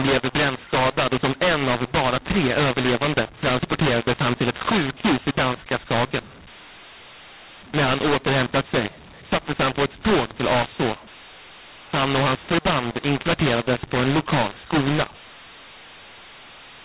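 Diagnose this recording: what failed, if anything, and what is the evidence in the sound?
The speech is harsh and gritty for the whole recording, with levels scrambled so some samples come out too large and others too small, and the pauses fill with a hiss instead of falling silent. This is mu-law and A-law mixed up at the codec stage. The audio was written as A-law and decoded as mu-law, so each 8-bit code maps to the wrong level and the quietest samples are pushed well above silence. The telephone band, cut off near 4 kHz, comes through as expected.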